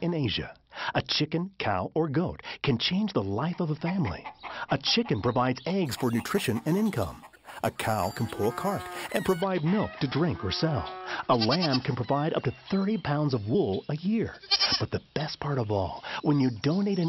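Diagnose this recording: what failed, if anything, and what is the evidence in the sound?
A sample-rate conversion stage failed between 5.86 and 9.42 s, where the audio was raised in rate by simple sample-and-hold, repeating each sample with no smoothing filter. The result is imaging from sample-and-hold upsampling: a bright metallic fizz riding on the sound, tracking its level, with the first mirrored copy occupying 6 to 12 kHz at about 18 dB below the signal. That band fits audio at 12 kHz raised to 48 kHz.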